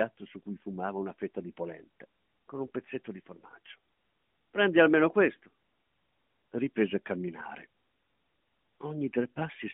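Listening through the speech, nothing stood out as a technical fault, with the sound staying within the narrow telephone band of the AMR narrowband mobile codec carrying it.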